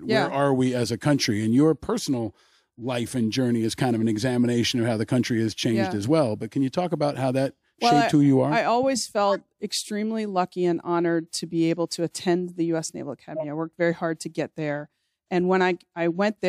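Corrupt frame decoded at 9.28–9.36 s, after "you are I always", and 13.36–13.45 s: damaged bits misplace energy, giving brief chirps, blips or bursts of noise peaking around -15 dBFS.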